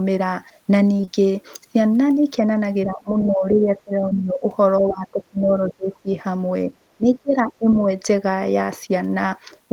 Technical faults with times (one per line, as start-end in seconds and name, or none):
0.93-1.09 repeated packet loss (robotic sound)
2.86-4.43 speech suppressed in double talk
4.09-4.13 short concealed packet loss
4.80-6.09 speech suppressed in double talk
6.97-7.68 speech suppressed in double talk